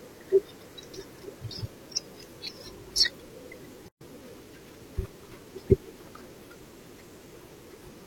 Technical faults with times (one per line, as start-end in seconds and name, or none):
3.88-4.01 gap at a join of encoded pieces